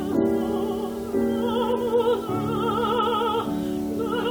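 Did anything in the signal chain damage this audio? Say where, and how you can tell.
Yes. Low bit depth without dither runs through the whole clip. Quiet passages turn gritty, with grainy distortion that tracks the sound and sits only about 25 dB down. This likely comes from a sample-format conversion that rounded to 6 bits without dither.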